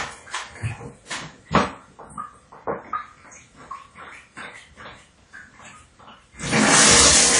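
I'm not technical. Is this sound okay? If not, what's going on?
No, not quite. Across the whole clip the sound has a plainly audible smeared, ringing, washy quality, with a hiss that swells and fades along with the sound itself. It also feels a bit dull, because everything above about 10.1 kHz is simply missing. That pattern is most likely WMA compression squeezed too hard: the encoder blurs detail over short stretches of time and throws away quiet, fine parts it can't afford to keep.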